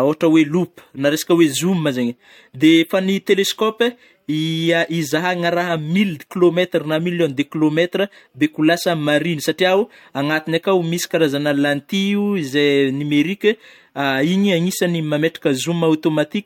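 Listening to the speech recording, nothing stood out as a technical problem at any point.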